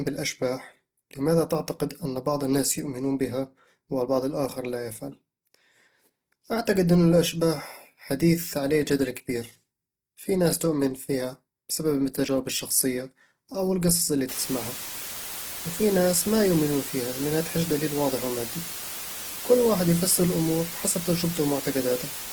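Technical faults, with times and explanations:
Throughout: Opus compression, likely the cause of the plainly audible damage. The audio sounds grainy and noisy rather than swirly, since missing detail is filled with folded bands or noise. Full bandwidth remains, reaching 20.1 kHz, which fits Opus's CELT music mode at around 16 kbps.
14.29–22.33 s: Low bit depth with dither starts right after "الشخصية أو القصص اللي". Dither turns the rounding error into a steady, even hiss about 10 dB below the signal, with no distortion. Undithered rounding would sound gritty instead. The noise level fits a 5-bit signal.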